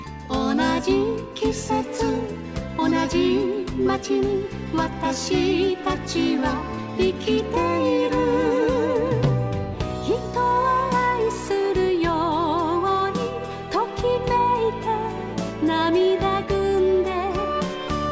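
No technical faults are audible.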